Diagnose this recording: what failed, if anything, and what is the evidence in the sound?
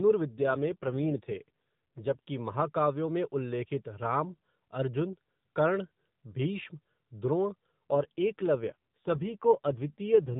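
Codec stage: an AMR rate drop, twice. From 0.3 to 2.19 s, just before "महाकाव्यों में उल्लेखित", and from 7.9 s to the end, the speech turns rougher and more synthetic with no gap or band change. That fits the network trading AMR-NB bits for error protection, 12.2 down to 5.9 kbps.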